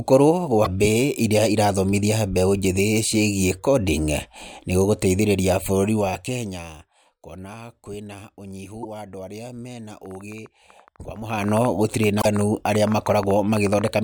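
At 0.61–0.67 s and 8.80–8.85 s, damaged data in a compressed stream makes the decoder lose frame sync, giving brief glitches, seen as smeared broadband blocks on a spectrogram. From 10.06 to 13.89 s, just after "andũ arĩa me na", a train of clicks, likely from interference, brings about 40 irregular pulses, roughly 9.7 per second and peaking about 5 dB above the speech. These show as thin vertical lines and sharp waveform spikes. At 12.18–12.25 s, inside that train, another glitch from corrupted stream data appears.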